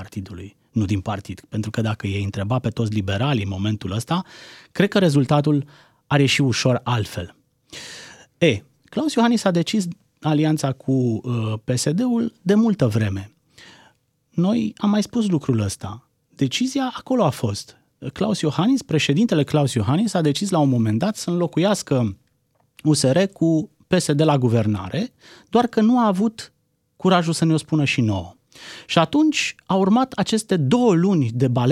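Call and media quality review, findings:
Sample clock jitter, 28.29–30.33 s: faint hiss riding on the speech, roughly 45 dB below signal. Converter clock timing wander, around half a microsecond, is strongest on steep, bright transients.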